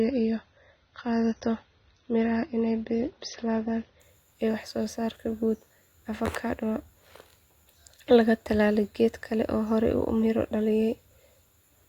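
From 0 to 4.0 s the speech shows an adaptive stream starting at a low bitrate: the player began on a lean version to start quickly, then switched up once it had measured the connection. Nothing is above 6.3 kHz, so sibilants sound dull and smeared, which fits a 24 kbit/s AAC stream. At 4.0 s the spectrogram's flat ceiling abruptly lifts, consistent with a 96 kbit/s step, and the waveform continues with no gap.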